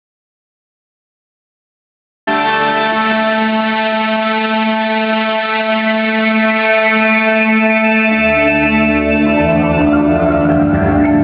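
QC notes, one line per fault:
0.00–2.27 s, audio dropout to silence: the clip opens in silence, with no room tone, and the sound cuts in abruptly at 2.27 s. This is likely a lost input with silence written. The waveform is a flat line and the spectrogram blank until then.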